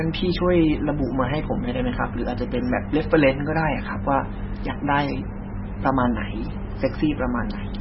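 MP3 compression, present throughout the speech, is the likely cause of the damage heard here. Nothing reaches above 5.6 kHz, so sibilants lose their edge and the sound turns dull. The encoder seems starved of bits, which fits a very low rate around 16 kbps. Quiet frequency lines drop out and return from frame to frame, giving a watery, swirling texture, metallic chirps on s sounds, and smeared consonant attacks.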